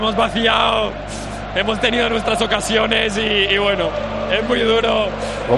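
Nothing to flag here: there's no audible technical fault anywhere in the clip, so the audio just runs its course without a hitch.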